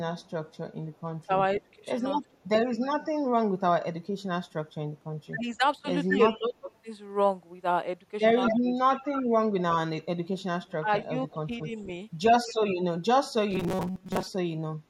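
From 0.22 to 2.47 s a very faint delayed copy of the speech trails about 243 ms behind, far below the talker. This is an echo leak: the far end likely plays the call on a loudspeaker, and its echo canceller let residual pickup slip back down the line. Within it, from 1.59 to 2.21 s, the talker dips slightly for a few brief moments, a small loss of level typical of speech suppressed in double talk, likely because the canceller mistook overlapping talk for echo and turned everything down.

Right after, between 2.22 and 2.33 s, the room sound sinks by about 7 dB for roughly a tenth of a second, then returns. That is background gated by the echo canceller, which clamped the microphone hard while the loudspeaker played and released it afterwards.

From 5.34 to 6.69 s the speech suppressed in double talk is heavier. About half a second in total is pulled down, by around 15 dB at worst, so the talker ducks and thins in pieces, likely as the canceller again couldn't tell its own talker from echo.

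At 8.46 to 8.60 s a short echo leak appears, about 231 ms behind and almost as loud as the original, likely from the same loudspeaker path. From 10.68 to 12.52 s it returns at that delay, about 20 dB below the speech. Overlapping it, from 10.78 to 11.74 s, the talker drops out in chunks totalling roughly 300 ms, by around 20 dB, as double-talk suppression bites hardest.

From 13.51 to 14.27 s the speech turns into a rigid metallic buzz near 188 Hz that still roughly tracks the syllables. This robotic sound from repeated short buffers likely comes from audio arriving too seldom, with the player looping its last chunk, which fits about a 5.3 ms buffer, over most of the stretch.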